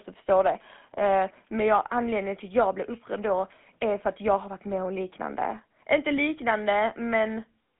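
From start to finish the speech has a buzzy, gravelly roughness, plainly audible, and sits in a narrow telephone band of roughly 200 Hz to 3.5 kHz with nothing above 3.8 kHz. This is GSM full-rate codec damage, which fits a 13 kbps stream. The codec keeps a model of the vocal tract but rebuilds its excitation from a sparse train of regularly spaced pulses, and that coarse excitation is what grinds through the voice.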